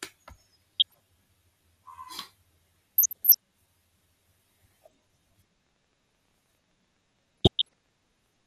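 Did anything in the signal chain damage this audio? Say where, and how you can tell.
Yes, at a few stages. The codec is the first one: the whole clip sounds dull and gurgly, with a granular edge on the speech and the top end coming and going. That's likely MP2 compression, with MPEG Layer II starving its upper sub-bands of bits so they switch off or get quantised coarsely. The damage is plainly audible throughout, and it fits a low rate somewhere around 80 kbps.

On top of that there's DAB burbling, which points to the transmission or reception stage feeding that MP2 decoder. You hear bursts of burbling from 0.74 to 0.94 s, 2.95 to 3.37 s and 7.38 to 7.74 s. Bit errors slipped past error correction into the audio frames, so individual sub-bands jump in level for a frame at a time. The error rate behind it sounds low, well under one percent, but enough to corrupt a run of frames each time.

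From 5.36 s to 8.41 s there's a train of clicks, around thirty of them at about 9.9 per second but irregularly spaced. They all have much the same shape and peak at about the same level as the speech. They keep ticking through the pauses too. That looks like something injecting pulses, likely interference from nearby equipment or a struggling interface rather than the codec itself.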